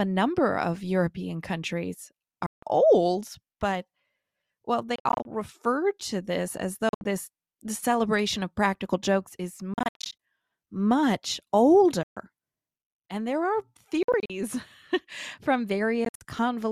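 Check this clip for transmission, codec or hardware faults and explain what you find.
The speech has seven brief gaps where the audio cuts out and resumes.

Bluetooth dropout at 2.46–2.63 s (just before "old but"), 4.96–5.25 s, 6.89–7.05 s, 9.74–10.19 s (after "of practical jokes is"), 12.03–12.17 s, 14.03–14.30 s (after "there are") and 16.05–16.21 s. The likely cause is audio packets missing their delivery deadline to the headphones and being discarded, leaving hard-edged silences of 120 to 240 ms. Most are broken into several short holes, the longest run about 67 ms, spread over up to 450 ms. Each time, speech resumes further along, as though it had kept playing through the gap.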